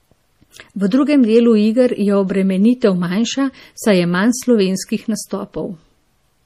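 From start to end, the treble stops at 15 kHz and the speech sounds watery and swirly. This is likely MP3 compression at a low bitrate, perhaps near 40 kbps.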